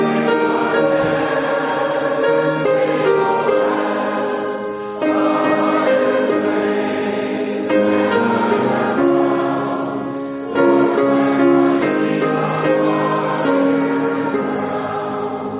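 Nothing here counts as a technical fault: the sound comes over a call connection that tops out around 4 kHz, which fits a G.711 mu-law link at 64 kbps, and that narrow band is simply how such a line sounds.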